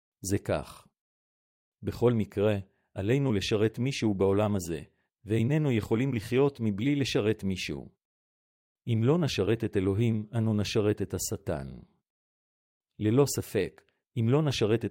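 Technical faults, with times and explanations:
No technical faults can be heard anywhere in this speech.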